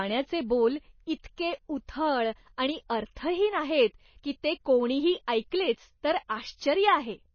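The whole clip has a hard ceiling with nothing above 6.6 kHz, plus a watery, swirly texture on the speech. That's most likely MP3 compression at a starved bitrate, something like 24 kbps, where the encoder drops the treble and lets weak detail flicker in and out.

There's pre-echo at about 3.15 s and again at 6.28 s. The codec smeared its noise across the block, so a short hiss of roughly 15 ms and 12 ms creeps in just ahead of each attack, which lands soft.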